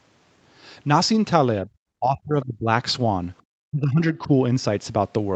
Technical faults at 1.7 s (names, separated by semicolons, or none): speech suppressed in double talk